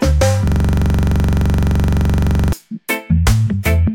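A system hang loop runs from 0.48 to 2.53 s. The playback stalled while the audio hardware kept reading the same ring buffer, so one 42.67 ms slice repeats exactly, about 48 times. That loop length fits a 2048-sample buffer. Cycling at 23.4 Hz, it falls between a buzz and a stutter and comes across as a hard, rapid rattle, frozen on one fragment until normal playback resumes.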